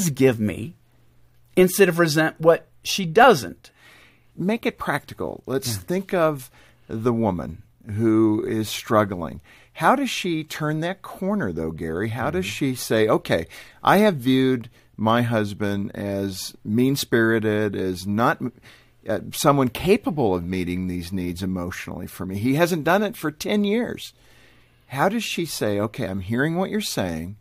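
A speech recording, with nothing technically wrong with it.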